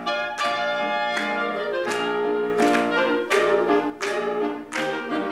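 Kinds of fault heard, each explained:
Sudden gain jump: At 2.5 s the level steps up by about 6 dB with no fade, holds there, and drops back at 3.9 s. The change is abrupt, from one instant to the next. The background noise rises and falls with the sound, so the whole signal was scaled at once. The likely cause is a digital gain setting applied without a ramp, then removed the same way.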